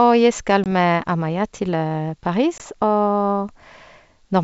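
Hard-edged silent gaps cut the speech at 0.64 to 0.67 s and 2.58 to 2.63 s, about one packet's worth each. This is packet loss on an ADPCM call: the G.722 decoder's predictor and step size drift from the sender's, so the sound resumes briefly disturbed.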